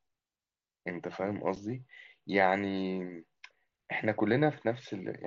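Speech over a wideband mSBC headset link, with one instance of unconcealed Bluetooth headset packet loss at 1.56 s: a packet of about 7.5 ms, consistent with one lost headset frame, drops out, replaced by silence or an idle pattern, leaving an abrupt gap that shows as a thin vertical break on a spectrogram.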